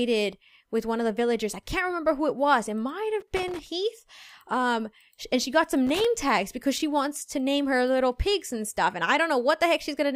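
Loose connector crackle breaks out from 3.20 to 3.67 s and again from 5.87 to 6.05 s: a worn contact repeatedly losing and regaining connection, chopping the signal into irregular scratchy bursts. The waveform shows jagged dropouts and spikes, and the spectrogram shows broadband vertical streaks.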